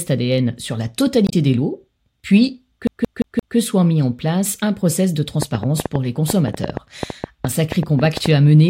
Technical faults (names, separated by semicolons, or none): damaged data in a compressed stream; CD stuck on one turn; train of clicks